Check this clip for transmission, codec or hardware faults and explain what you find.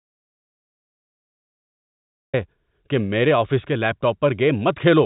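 One fault is present: an audio dropout to silence at the very start. From 0.0 s to 2.34 s the signal is silent, already under way when the clip begins and with no room tone at all. The speech then enters abruptly at "کہ میرے آفس کے". The likely cause is lost input, such as a disconnected device or failed link, while the recorder kept writing silence. On a waveform this is a flat line. A spectrogram shows a completely blank region before the first speech energy. The G.711 telephone coding shows up only as the band limit, with nothing above 3.8 kHz.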